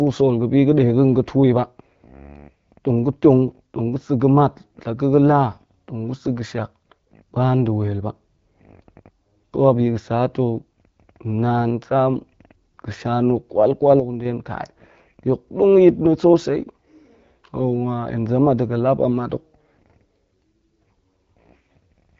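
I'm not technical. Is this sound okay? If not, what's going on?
No. One channel drops out from 14.00 to 14.25 s, just after "ga̱sha na̱ kwal kwal". The speech suddenly dips quieter, likely because one stereo side briefly went silent.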